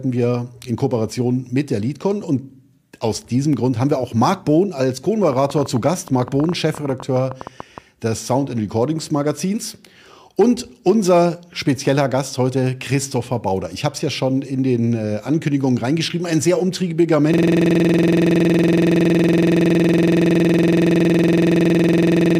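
Sample clock jitter runs through the whole clip: the converter's timing wanders by a couple of microseconds, so each sample lands slightly early or late, leaving a roughness around 40 dB below the signal that rises on loud, bright passages and disappears in silence. A train of clicks sits between 5.24 and 7.79 s, about thirty similar pops at roughly 11 per second with uneven spacing, peaking a few dB above the surrounding sound and heard even in gaps; nearby electrical interference or a struggling interface is the likely source. A system hang loop starts at 17.34 s and lasts to the end: one 46.44 ms slice of audio repeats exactly over a hundred times, which fits a 2048-sample buffer being replayed while the computer or driver froze, producing a rapid stutter-buzz at 21.5 Hz.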